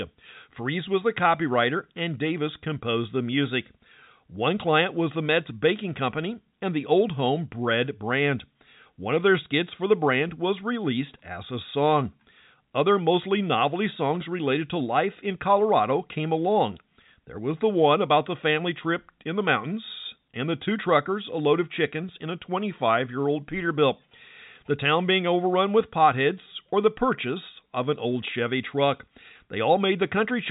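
The speech shows no technical faults, and it carries the narrow band of G.711 telephone coding, with nothing above about 3.8 kHz, which fits a 64 kbps A-law line.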